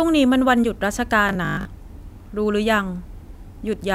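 From 1.29 to 1.65 s the speech turns rigid and metallic, a robotic sound from repeated short buffers, likely from about half the audio being replaced by loops of the last 20 ms. That imposes a 50 Hz buzz, seen as evenly spaced harmonic lines on a spectrogram and identical repeating cycles in the waveform.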